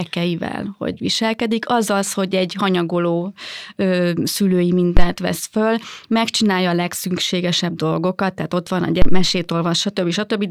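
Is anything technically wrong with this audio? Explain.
Yes. Phantom power thumps occur at 4.97–5.09 s, just before "vesz föl megcsinálja a", and at 9.02–9.33 s, right after "tehát ott van a". Switching the supply on a live input sends a voltage step through the coupling capacitors, heard as deep thumps peaking near about -1 dBFS and decaying over 28 ms and 70 ms.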